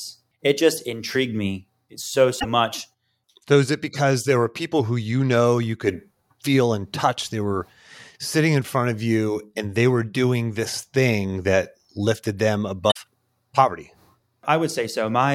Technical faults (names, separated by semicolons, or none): damaged data in a compressed stream